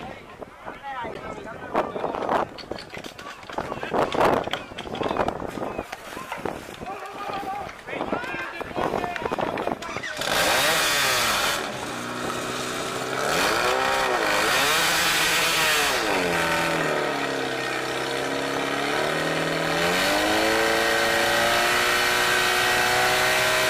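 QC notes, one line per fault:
1.11–1.17 s, damaged data in a compressed stream: a short run of the encoded stream arrives corrupted, so the decoder cannot read the frames there, loses its place and hunts ahead for the next valid frame header before picking up again. For roughly 50 ms this comes out as a brief chirp, squawk, click or short hole in place of the audio.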